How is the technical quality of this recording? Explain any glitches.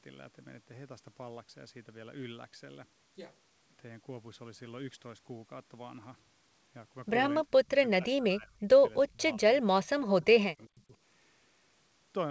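The speech runs through a call path that tops out at 8 kHz, consistent with a wideband G.722 link, and there's one recurring glitch: speech suppressed in double talk, from 7.66 to 7.82 s, 7.98 to 8.72 s, 9.11 to 9.22 s, 9.38 to 9.42 s and 9.85 to 10.95 s. The voice dips in chunks, by as much as about 40 dB, most likely because the echo canceller mistook it for loudspeaker echo while the far end was talking and turned it down.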